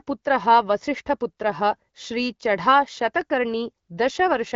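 The speech comes through an AMR wideband (HD Voice) codec at 12.65 kbit/s, a rate at which it stays clear with only light coding effects, and nothing in the signal points to a technical fault.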